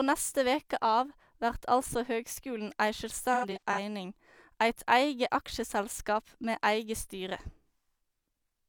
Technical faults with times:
3.33-3.79 AAC frame loss with concealment

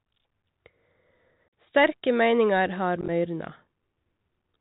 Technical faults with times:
0.00-4.60 Bluetooth CVSD headset codec
1.49-1.51 unconcealed Bluetooth headset packet loss
3.01-3.10 unconcealed Bluetooth headset packet loss

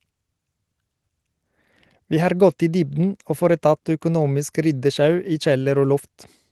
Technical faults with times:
none

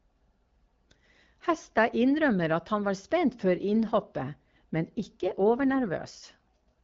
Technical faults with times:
4.99-6.81 AMR rate drop

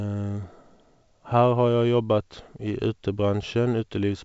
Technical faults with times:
none

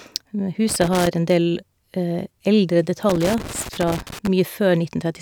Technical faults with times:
0.69-1.07 loose connector crackle
3.09-4.27 loose connector crackle

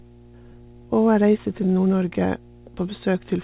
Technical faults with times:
0.00-3.44 mains hum
0.34 skip ahead
0.44-1.85 jitter buffer speed-up

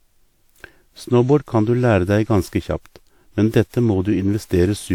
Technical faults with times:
0.00-4.95 generation loss

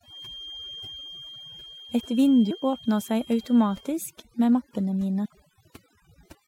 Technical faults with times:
0.00-6.47 overdone noise removal

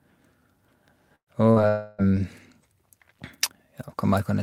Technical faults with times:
1.15-1.30 burst of packet loss
1.68-2.01 long network dropout

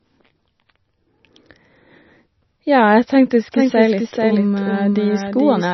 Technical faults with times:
0.00-5.73 MP3 compression
3.52-5.73 doubled audio track

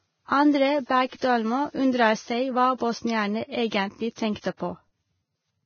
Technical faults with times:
0.00-5.66 Vorbis compression
2.78-2.80 pre-echo
3.67-3.72 pre-echo
4.13-4.44 pre-echo

